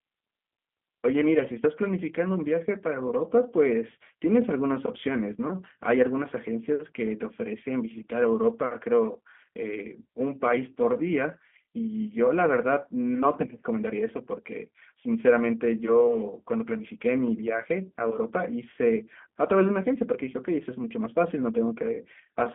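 Throughout the recording the speech carries the sound of the G.729 codec, at 8 kbit/s and confined to a telephone band of roughly 200 Hz to 3.4 kHz. The coder rebuilds each frame from a vocal tract filter, a pitch predictor and a few sparse pulses, so the damage here is plainly audible: a rough, slightly synthetic texture on voiced sounds. A simple band-limited line would sound thin but clean, without that rasp.

At 16.79 to 16.82 s comes VoIP packet loss concealed by the speech codec. The gap fits a single lost 10 ms frame. The decoder filled it by extending its last pitch and filter with falling gain, and because each frame builds on the previous one, the disturbance lasts about 34 ms. The result is a brief buzzy or noisy, smeared stretch rather than the hard silence or click of an unconcealed dropout.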